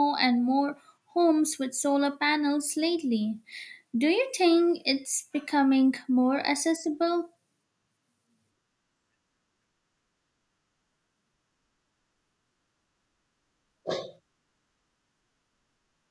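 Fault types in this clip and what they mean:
No technical faults can be heard in this recording.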